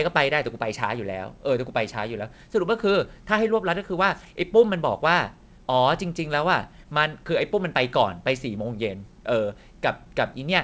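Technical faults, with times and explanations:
Throughout: clock drift between sender and receiver. The sender's clock runs about 4 percent fast. The jitter buffer keeps overfilling and must shed audio.
0.26 to 10.35 s: repeated timing corrections. The receiver keeps cutting short pieces at uneven intervals. Speech runs at 104 percent.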